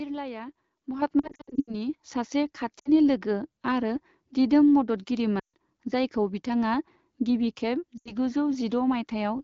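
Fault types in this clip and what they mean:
Microphone volume stepped up: the call software raised the microphone input gain in one jump rather than gradually. Speech and background noise both rise by about 8 dB together at 1.02 s, which is heard as an abrupt level step.
Lost AMR speech frames: the decoder replaced corrupted frames by repeating the last good speech settings at falling gain, giving smeared, fading dips. Losses are scattered across 1.19 to 1.74 s, then shorter gaps at 2.79, 5.39 (before "जायखौ बिथाङा") and 7.98 s.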